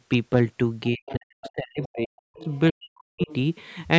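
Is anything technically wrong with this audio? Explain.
Yes. The speech is suppressed in double talk from 0.9 to 2.49 s and from 2.7 to 3.3 s. It dips by as much as about 40 dB, likely because an echo canceller turned everything down while both sides spoke.

The other side's voice is leaking through at 1.06 to 1.14 s, 1.45 to 1.5 s, 1.83 to 1.88 s, 2.4 to 2.59 s, and 3.21 to 3.33 s. These are faint scraps, about 15 to 25 dB below the speech. The likely cause is loudspeaker echo that the canceller did not fully remove.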